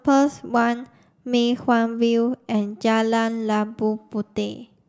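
A short speech recording, and nothing is technically wrong with it.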